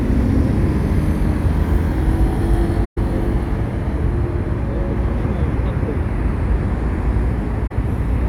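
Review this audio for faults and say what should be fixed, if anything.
AAC frame loss with muting leaves two soft-edged gaps, at 2.84–2.98 s and 7.66–7.72 s. The decoder zeroed the missing spectra, so overlapping windows fade the audio out and back in. Their lengths fit about six and two lost frames. Adding forward error correction or retransmission to the transport would prevent this.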